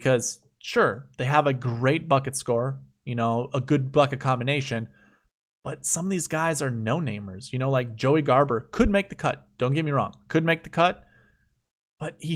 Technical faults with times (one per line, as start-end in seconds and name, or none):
none